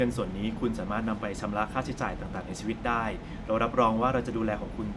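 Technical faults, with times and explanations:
No technical faults heard.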